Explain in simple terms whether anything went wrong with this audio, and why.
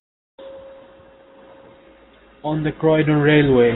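Nothing went wrong here.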